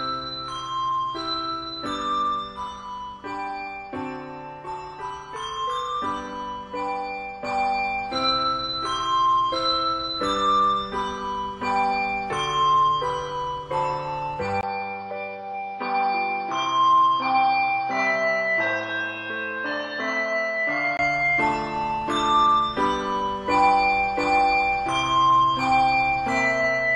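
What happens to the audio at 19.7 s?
An input switched to a poorer device runs from 14.61 s to 20.99 s, so 19.7 s falls inside it. The sound is band-limited, with nothing above about 6.2 kHz, so it is duller and boxier than before. A new noise floor sits roughly 35 dB below the signal. The loudness barely changes. A 20 ms gap at 14.61 s marks the change, which is likely the system moving to another microphone or a headset's narrower call profile. Full bandwidth returns at 20.99 s.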